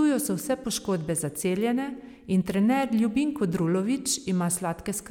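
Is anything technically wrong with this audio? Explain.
No, nothing technically wrong turns up in this speech recording; it all sounds just as it should.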